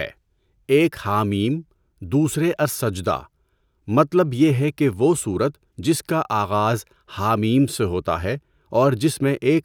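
No technical faults are audible.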